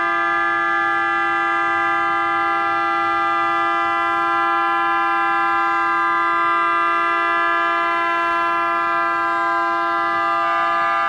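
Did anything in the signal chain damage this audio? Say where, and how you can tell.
No, nothing in the signal chain audibly damaged this audio; the signal holds steady throughout with no point where any stage can be heard degrading it.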